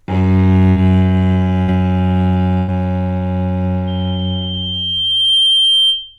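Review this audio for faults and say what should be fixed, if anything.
There are three bursts of packet loss, at 0.69–0.78 s, 1.62–1.70 s and 2.58–2.70 s. Each time the receiver stretches the last bit of sound for 60 to 100 ms, fading it down, then jumps ahead, skipping roughly the same span. A steadier network path or a bigger jitter buffer, with redundancy or FEC, would prevent it.

From 3.87 s to the end there's a loudspeaker feedback squeal. The mic is hearing its own speaker, and a 3.2 kHz tone builds over about a second and a half until it sits a few dB above the actual sound. Cutting monitor gain, moving the mic away from the speaker, or notching 3.2 kHz would stop it.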